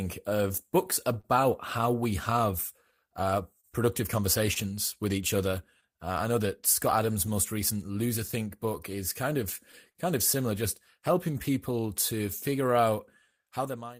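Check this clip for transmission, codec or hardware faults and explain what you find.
The speech shows several network timing faults: a drifting clock, ongoing timing corrections, two brief stalls, and two clusters of concealed gaps.

Clock drift between sender and receiver runs throughout. The sender's clock is slightly slower, roughly 3 percent, so the receiver's buffer keeps draining and timing wobbles unevenly.

Repeated timing corrections run from 0.47 to 13.34 s. To compensate, the receiver stretches playback to 98 percent speed, adding roughly a third of a second, heard, if at all, as faint hiccups and unsteady pacing.

Short stall from a late packet at 1.21–1.25 s and 9.91–9.97 s. The buffer ran empty, so the last sound was held for 28 ms and then 43 ms, giving a slight buzz or dip.

Scattered short gaps at 2.91–4.58 s and 7.14–8.34 s, about three in each stretch. Each was patched by continuing the previous sound, with the longest about 30 ms, leaving brief ticks or smears. 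The fade-out near 13 s is smooth.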